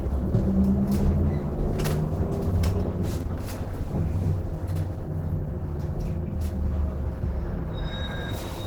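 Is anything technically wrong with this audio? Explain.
Yes. Throughout the clip, the sound carries plainly audible Opus compression damage, likely from a low-rate encode that fits about 16 kbps in Opus's hybrid mode. Detail comes across grainy, rough and noisy, with a hoarse, muffled quality, yet content still reaches about 20.1 kHz. The encoder keeps each band's energy and fills starved bands with noise or folded copies. That leaves texture rather than the swirling, holey artefacts that distinguish MP3 at similar rates.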